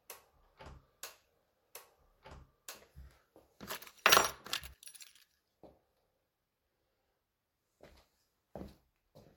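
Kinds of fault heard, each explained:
Doubled audio track: The same sound plays twice, with a second full-band copy trailing the first by about one and a half seconds. The copy is about as loud as the original. It carries no decay or added room colour, so it is not an echo. The doubling is already present when the clip opens and stops abruptly at 4.74 s. The likely cause is a second capture through a slower path, mixed back in out of step.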